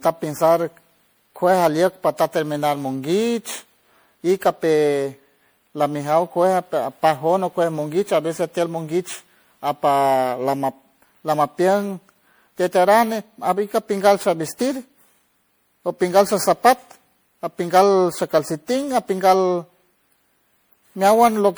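Generation loss runs throughout this speech clip, with swirly, smeared, hollow tone and blurred attacks, likely from MP3 re-encoding around seven times, consistent with 96 kbit/s, accumulating quantisation noise.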